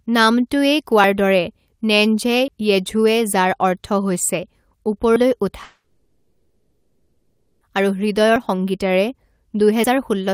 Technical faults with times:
2.48 dropped buffer (overrun)
5.16 dropped buffer (overrun)
5.63-7.63 long network dropout

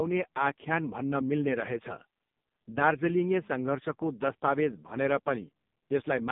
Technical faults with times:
0.00-6.32 AMR narrowband mobile codec

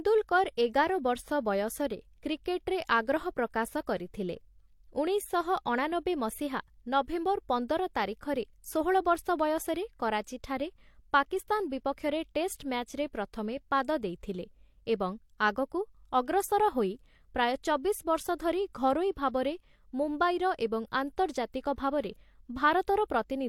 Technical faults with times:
0.00-23.49 transcoding between lossy codecs

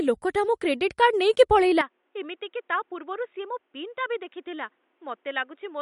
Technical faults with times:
0.00-5.82 MP3 compression
1.81-5.82 input switched to a poorer device

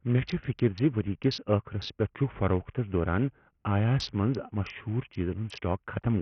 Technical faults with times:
0.00-6.21 Bluetooth SBC compression

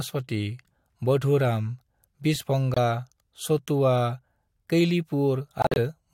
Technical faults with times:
2.74-2.77 corrupt frame muted
5.60-5.77 corrupt frame muted

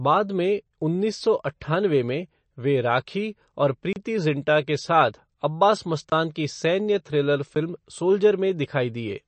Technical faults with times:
0.00-9.28 MP3 compression
3.93-3.96 block of digital silence
6.10-6.12 block of digital silence
7.55 block of digital silence

